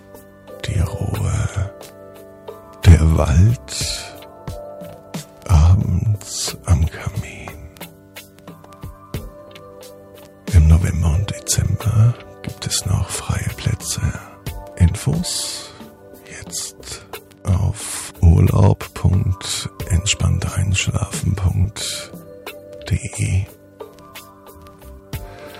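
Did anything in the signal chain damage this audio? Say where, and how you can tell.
Yes. Hard clipping occurs twice, at the level-handling stage, either the converter input or a sample-format conversion that cannot hold the peaks. From 2.88 to 2.94 s the signal is driven about 8 dB past full scale, and from 18.29 to 18.67 s about 2 dB past it. The tops are cut flat, adding high harmonics heard as harsh crackle on the loud moments. Unlike a dropout, nothing is missing: the sound continues unbroken but distorted.

At 11.66 s there is a small jump forward, roughly 5 ms of audio gone and the two sides joined with no gap of silence. That seamless skip points to the driver or buffer stage, likely a dropped buffer (overrun), where samples were overwritten before being collected. It differs from clipping because it is a timing break rather than distortion of level, and from a codec or network dropout because no silence or smearing is inserted.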